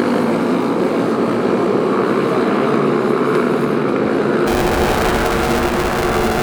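From 4.46 s to the end at 6.43 s, a rattling, robotic buzz at about 345 Hz rides on the sound. This is buffer tearing: writer and playback have slipped, so roughly half of each period, which fits a 128-sample buffer, replays audio about 10 ms old, with hard joins.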